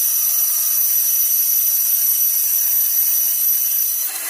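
From 2.35 s to the end at 4.29 s, a USB whine sits under the sound: a steady tone fixed at 8 kHz, roughly 35 dB below the signal. It comes from the bus's 125-microsecond microframe current draw leaking into the audio through power or ground.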